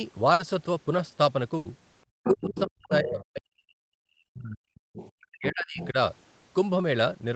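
At 0.33 to 0.41 s and again at 1.57 to 1.67 s there is a burst of packet loss. Roughly 60 ms and then 80 ms of audio never arrived in time, so the receiver stretched the last sound it had and faded it, and playback resumes with that stretch missing. On a spectrogram each gap shows as a smeared, repeated slice whose harmonics fade out before the fresh signal starts abruptly. The waveform shows a decaying copy of the preceding cycles.

From 2.23 to 2.63 s a second voice sits underneath the talker at about 10 dB below it, likely the other side's voice leaking through from a loudspeaker the echo canceller did not fully cancel. On the spectrogram it appears as a faint, separate set of harmonics tangled with the main ones.

Overlapping that, from 2.26 to 4.77 s, the talker's level drops in pieces. This is speech suppressed in double talk, likely the echo canceller turning everything down while both sides spoke. 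About 2 s of that span is affected, with the deepest dips around 40 dB. The waveform shows sudden notches in the envelope, and the spectrogram thins to near-empty columns.

Further leakage follows at 4.79 to 5.10 s, around 20 dB down, likely the same echo path. Suppression returns at 5.14 to 5.95 s, again likely double talk, affecting roughly 0.7 s with dips near 40 dB. Inside it, at 5.80 to 5.88 s, a brief scrap of leaked voice about 15 dB down, likely from the far end, pokes through as a short smudge of harmonics.

Across the whole clip the spectrogram tops out near 8 kHz, which fits a wideband Opus call path.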